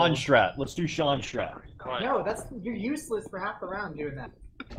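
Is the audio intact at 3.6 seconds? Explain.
No. At 3.6 seconds the sound is rough and muffled, with the top end gone. This is a call bitrate drop lasting from 0.65 to 4.05 s. The encoder was forced to code far more coarsely, falling from about 64 to 11 kbps and staying at its lowest for 1.33 s.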